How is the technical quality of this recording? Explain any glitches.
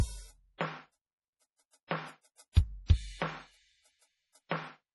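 The recording has heavy compression damage throughout and several smeared attacks.

Across the whole clip nothing sounds above 11.5 kHz, and the music has a watery, swirling texture with chirpy highs. This is likely MP3 compression at a low bitrate, near 32 kbps: the encoder cuts the treble and drops weak frequency lines frame by frame. Unlike a plain low-pass filter, the remaining sound flickers.

Pre-echo comes at 2.35 s, 2.52 s, 2.86 s and 4.49 s, where a short hiss of about 26 to 43 ms leads each sharp attack. The codec spreads its block's noise before the transient. Unlike reverb or echo, the smear comes before the hit, not after it.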